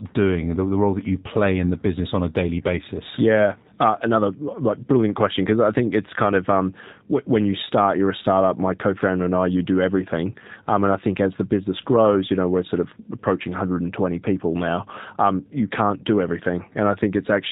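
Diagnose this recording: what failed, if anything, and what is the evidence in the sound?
G.729 codec damage, present throughout: the speech is band-limited below 4 kHz with a rough, synthetic texture, consistent with an 8 kbit/s G.729A encode rebuilding each frame from filter and pulses.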